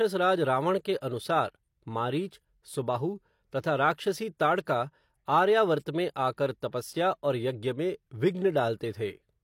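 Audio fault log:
1.00 s, pre-echo: Just after "रावण के", a short hiss of about 16 ms runs ahead of a sharp onset in the speech, so the attack sounds softened and smeared. The codec spread its quantisation noise across the whole transform block, and the noise sized for the loud onset also landed in the quiet stretch before it. A spectrogram shows a thin broadband haze just before the onset's vertical edge. The waveform shows low-level fuzz where there should be silence.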